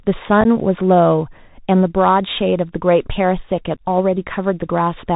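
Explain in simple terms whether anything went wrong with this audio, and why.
Two things went wrong. The whole recording carries the sound of a Bluetooth CVSD headset codec, the basic low-quality link headsets use for calls. It can't carry anything above about 4 kHz, so the speech sounds muffled and phone-like. It encodes the sound in tiny up-or-down steps that can't keep pace with sharp, bright sounds. That gives s sounds a scratchy edge and leaves a grainy hiss underneath.

On top of that there are two moments of unconcealed Bluetooth headset packet loss, where a few small chunks of sound never made it from the headset. The first is around 0.41 to 0.46 s. There, about 19 ms of audio vanishes in pieces spread over roughly 38 ms, and the longest gap is about 11 ms. The second is around 3.76 to 3.82 s, with about 23 ms gone across 30 ms. Nothing was patched in to cover the gaps, so you hear brief rough dropouts with abrupt edges, and the speech comes back a touch quieter for a moment.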